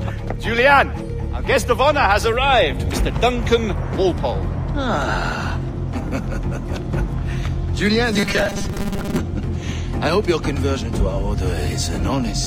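Robotic sound from repeated short buffers runs from 8.13 to 9.20 s: the audio collapses into a rigid, metallic buzz at 200 Hz. The likely cause is fresh audio arriving too seldom, so the last 5 ms block is replayed in place of roughly half the real material.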